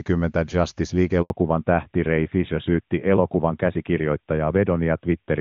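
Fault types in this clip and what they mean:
Handover gap: the call jumped networks and no frames came through, so the audio just drops out for about 80 ms around 1.22 s.
Fallback to narrowband: right after that gap the HD Voice link falls back to a narrowband codec, nothing above 4 kHz survives, so everything sounds duller and rougher.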